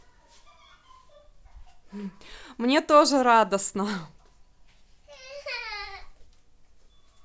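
No technical faults are audible.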